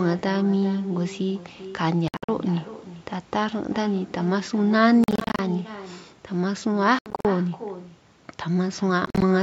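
From start to finish, every phrase is trailed by a quieter, thinner copy arriving roughly 400 ms later, about 15 dB down. This is echo with no canceller: the far end's loudspeaker fed the microphone, and nothing removed that return path.

The sound then breaks into bursts of short holes at 2.08 to 2.29 s, 5.04 to 5.39 s, 6.99 to 7.25 s and 9.06 to 9.22 s. Each gap resumes as if playback had continued, and the longest single silence runs about 73 ms. These are likely Bluetooth dropouts, where late packets were discarded.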